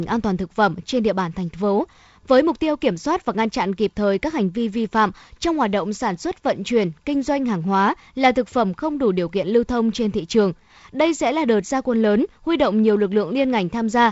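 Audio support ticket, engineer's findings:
Findings: no faults in the speech; the G.722 wideband path at 48 kbit/s is audible as its usual top-end limit near 7.7 kHz, with light coding noise.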